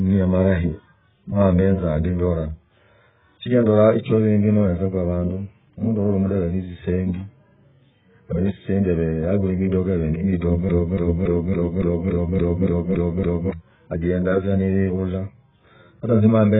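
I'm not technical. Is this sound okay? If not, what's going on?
No, it has two problems. The whole clip sounds dull and muffled, with nothing above about 3.8 kHz, and the speech has a smeared, warbly, fizzy edge. That's heavy AAC compression, likely squeezed very hard so the encoder threw away the crisp top end and blurred the rest.

From 10.69 s to 13.53 s you get a broken-record loop: a short chunk of about 0.28 s plays ten times back to back, like a stuck CD. The player or stream likely stalled and kept resending that piece, so whatever should have been heard there is gone.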